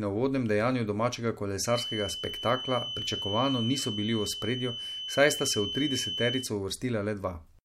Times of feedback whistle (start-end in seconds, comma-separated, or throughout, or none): 1.64-6.51